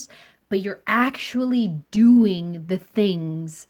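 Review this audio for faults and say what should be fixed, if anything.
Repeated stalls (stutter) from 1.95 to 2.91 s, right after "but you're actually": ten short gaps, the longest 25 ms, where the receiver stretched the last sound while its jitter buffer ran dry, about 11% of that stretch. Nothing is lost, but the speech drags. A deeper or adaptive jitter buffer and steadier packet delivery would prevent it.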